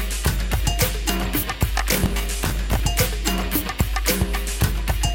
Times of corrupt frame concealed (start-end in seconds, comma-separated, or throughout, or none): none